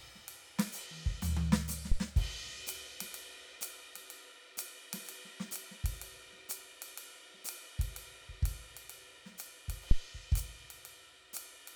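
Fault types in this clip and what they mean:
Phantom power thump: a supply switching on a live input pushes a voltage step through the coupling capacitors, giving deep thumps at 1.9 s and 9.9 s that peak around -16 and -12 dBFS.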